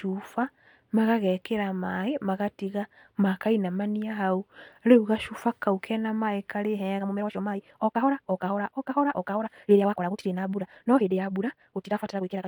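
Speech clip. From 6.96 s to the end, a time-stretched section runs at 1.92 times speed. Pitch holds steady while delivery turns rushed. Software likely dropped short pieces to shorten it.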